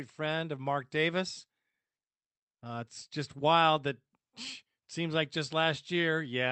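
Nothing goes wrong in this one; the speech comes through the call path as you'd expect, with the top end stopping at around 8 kHz and the usual coding texture that an Opus call normally carries.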